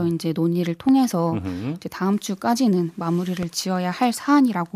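At 0.89 to 0.91 s a loud pop lands, roughly 10 dB above the speech, and a weaker one follows at 3.43 to 3.45 s, about 5 dB above. Each is a single sharp click, likely a voltage spike from a switch or static, with speech continuing underneath.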